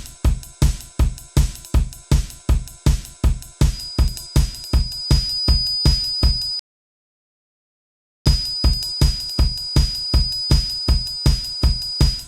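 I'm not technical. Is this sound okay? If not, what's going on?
No, there are two problems. From about 3.68 s right to the end, a thin high whistle around 4.9 kHz, slowly swelling and fading, sits quietly behind the sound. That's likely a feedback whistle, where a loudspeaker's output leaks back into the microphone and one pitch keeps ringing without building up.

The second is a rebuffering stall at 6.59 s: the sound drops to silence until 8.26 s, then carries on exactly where it left off. The player ran out of downloaded audio and waited, so nothing's missing, but about 1.7 s of dead air gets added.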